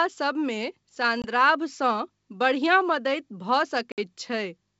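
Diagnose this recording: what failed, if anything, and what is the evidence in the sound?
Packet loss on the ADPCM call, at the network stage: hard-edged silent gaps at 1.22–1.27 s (20 ms lost, one packet) and 3.92–3.99 s (60 ms lost, about three packets). The G.722 decoder's predictor and step size then lag the sender's, so speech resumes slightly distorted before resynchronising.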